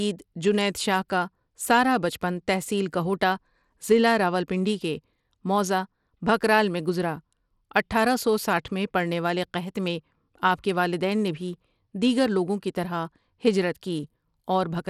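Throughout, the speech has gritty, coarse treble with nothing above 17.3 kHz, likely Bluetooth SBC compression at a small bit pool, which fits roughly 96 kbps.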